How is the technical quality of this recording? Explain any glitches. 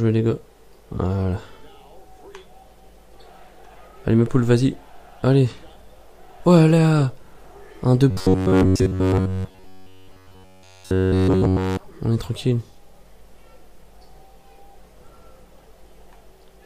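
Quality breaks down in one stretch, from 8.11 to 11.78 s, where the audio becomes robotic sound from repeated short buffers. The sound turns into a rigid, metallic buzz at about 93.8 Hz, with essentially every moment of that span affected. The likely cause is delayed audio delivery: playback loops a fragment of roughly 10.7 ms while the real signal is skipped, and that loop rate sets the fixed buzz pitch.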